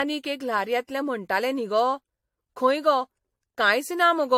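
A short speech recording with generation loss running the whole way through. It sounds swirly and hollow, the attacks on consonants are smeared, and nothing gets through above 16.5 kHz. That's more damage than a single encode at a decent bitrate would leave. The likely cause is repeated lossy coding, something like three rounds of AAC-LC in the 64 to 74 kbit/s range. Each pass re-quantises on a shifted frame grid, so the artefacts stack up.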